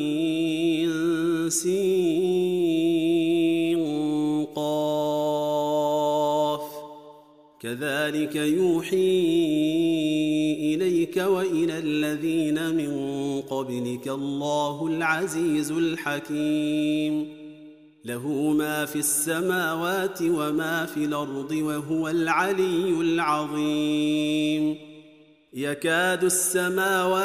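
No technical faults can be heard anywhere in this audio.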